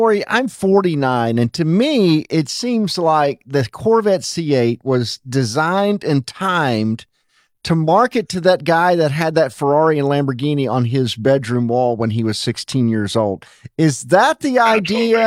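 Nothing in the recording stood out as a technical problem on listening.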